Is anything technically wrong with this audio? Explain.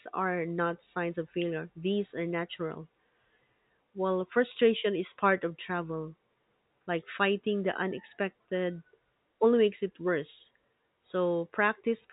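No, nothing is technically wrong.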